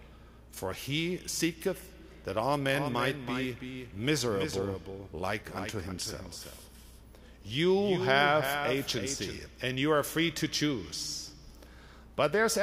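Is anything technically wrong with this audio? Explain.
Yes. From 2.74 to 9.38 s there is a doubled audio track. A second copy follows roughly 300 ms behind, about 5 dB quieter. It starts and stops abruptly. It is likely a second capture path or an edit holding two copies.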